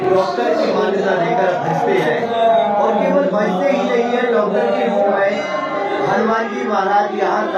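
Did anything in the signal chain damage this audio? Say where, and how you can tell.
Yes. The damage is at the driver or buffer stage, and it runs for the whole clip. Every sound arrives twice, the second copy about 42.7 ms after the first and at the same level. That gives a constant channel delay (doubling), heard as a tight slap echo. One channel has been held back by a full buffer, which fits a 2048-sample buffer at 48 kHz. The two channels were then summed to mono.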